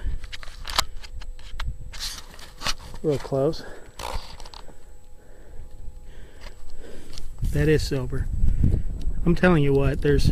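Nothing in the audio stood out as a technical problem on listening.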